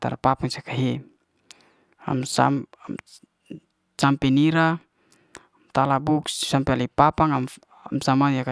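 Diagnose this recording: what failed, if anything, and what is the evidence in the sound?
Nothing failed here: listening across the whole speech recording, there's no stage of the chain that gives itself away, so there's simply nothing to report.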